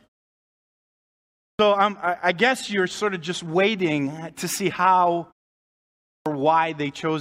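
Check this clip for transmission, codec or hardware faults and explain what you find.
Two clipped starts after a pause, at 1.51 s before "um I I guess" and 6.18 s: the sleeping output device wakes late, swallowing about 80 ms of onset. Sound starts abruptly, unlike muted pauses, where silence ends but nothing is lost.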